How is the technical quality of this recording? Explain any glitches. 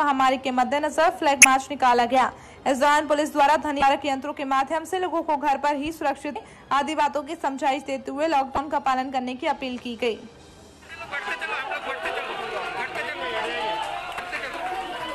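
The recording is marred by five brief glitches from damaged data in a compressed stream, at 1.42–1.45, 3.79–3.82, 6.32–6.36, 8.55–8.58 and 14.16–14.20 s. Corrupted bytes make the decoder misread those frames and lose sync, producing a short chirp, squawk, click or hole lasting about 30 ms each time.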